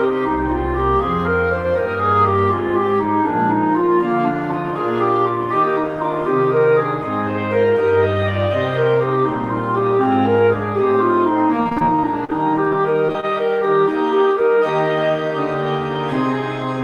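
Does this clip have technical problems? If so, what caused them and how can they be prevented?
Yes: repeated packet loss (robotic sound) from 11.63 to 13.25 s, where about a dozen short dropouts, the longest 38 ms, get patched by stretching the last sound, making it choppy and robotic. Prevent it with a steadier network link and a larger jitter buffer.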